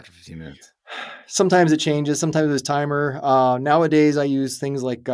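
No technical faults can be heard anywhere in this speech recording.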